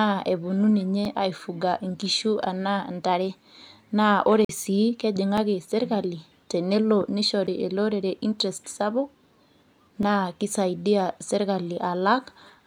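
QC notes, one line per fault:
1.05 s, 5.37 s, 7.47 s, 10.03 s: block of digital silence. The audio drops to silence for about 3 to 8 ms and returns with no fade, so each is heard as a click rather than a gap. The abrupt edges set it apart from a faded dropout.
4.45–4.49 s: block of digital silence, 46 ms long, heard as a short hole. The length fits a 2048-sample output buffer that was not filled in time.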